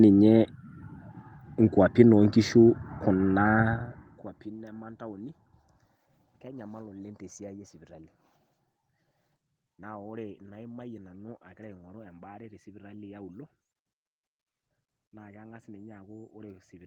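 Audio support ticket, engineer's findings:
Speech path checked across the full clip: no audible defects found, no fault to log.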